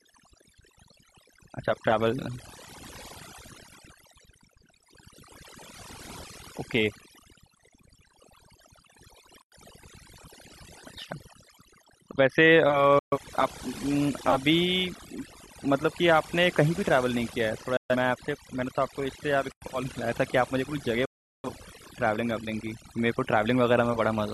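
Across the whole clip of speech, overdone noise removal is audible. A noise reducer set far too aggressively has pushed individual frequency bands down to almost nothing wherever they sat close to its noise estimate, taking the quieter parts of the voice with them. Pauses fall to near silence scattered with small twinkling specks.

At 9.42 to 9.52 s the first gap between chunks appears: a 100 ms hole, and a second identical one follows at 19.52 to 19.62 s. The spacing is about 10 s, which points to the audio being delivered in 10 s blocks with silence inserted at each join, from padding or late playback start. Nothing is missing; the flow is simply broken at each boundary.

Digital broadcast dropouts occur at 12.99 to 13.18 s, 17.77 to 17.96 s and 21.05 to 21.49 s. In each, the receiver lost valid frames and muted, fading out in about 3 ms. The first two each lose 128 ms of programme, which fits three failed frames. 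The last one is longer and drops 384 ms, consistent with nine frames. Unlike the chunk gaps, the material sent during these mutes is gone.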